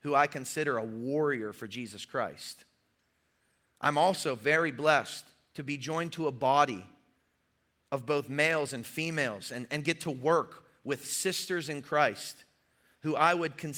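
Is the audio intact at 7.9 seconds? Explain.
Yes, at 7.9 seconds the audio is intact, with no fault of any kind at that moment.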